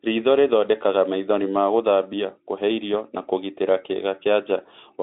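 No technical faults are audible anywhere in this recording.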